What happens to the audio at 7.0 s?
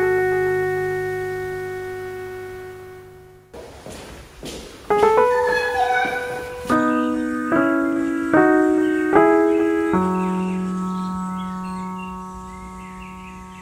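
Nothing goes wrong at 7.0 s; the audio plays through that moment intact, with no dropout, click or other fault.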